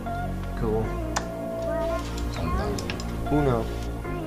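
A loudspeaker feedback squeal runs from 0.64 s to 2.00 s: the microphone is hearing the speaker it drives, and at 664 Hz the loop gain tops unity, so that tone feeds itself, swelling over roughly a second until it is about as loud as the rest of the sound. On a spectrogram it shows as one bright horizontal line at 664 Hz, thickening as it builds; the waveform envelope grows over roughly the first second of that span.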